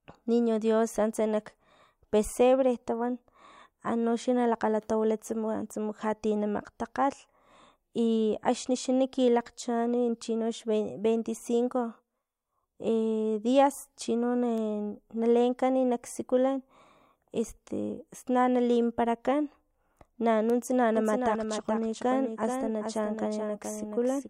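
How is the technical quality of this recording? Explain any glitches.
The one glitch is a doubled audio track: from 20.97 s to the end, a second copy of the speech runs alongside the original, roughly 400 ms behind and about 5 dB quieter. This is likely an edit that left two out-of-step copies, or audio captured again by a slower path. Unlike room echo or reverb, the copy is full-band and undecaying, and it cuts in abruptly at 20.97 s rather than fading in.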